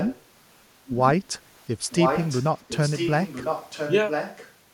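Echo leak at 0–0.22, 0.86–0.93, 1.9–2.48, 2.68–3.93 and 4.09–4.52 s: a copy of the speech returns about 1.0 s late, roughly 5 to 15 dB below it, likely from a loudspeaker's sound slipping past the far side's echo canceller.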